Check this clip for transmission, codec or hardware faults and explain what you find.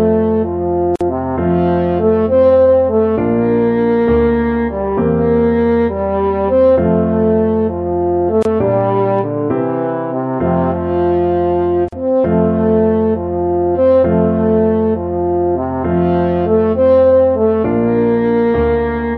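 Two faults are present: codec damage across the whole clip and three short dropouts at joins.

Throughout, the sound has a watery, swirling quality, with the treble dulled and faint detail flickering in and out, plus smeared attacks. This is likely MP3 compression, and the plainly audible damage fits a low bitrate around 64 kbps. With too few bits, the encoder cuts the top end at a fixed point and zeroes weak frequency lines, which then switch on and off between frames.

Three brief silences open in otherwise continuous sound: 0.96 to 1.01 s (about 50 ms), 8.43 to 8.45 s (about 26 ms), and 11.89 to 11.93 s (about 40 ms). Each has smeared edges, and the sound resumes where it left off. These are gaps at a join of encoded pieces. Sections were encoded separately and spliced without trimming, so each encoder's start-up delay and final-frame padding remain as dead air.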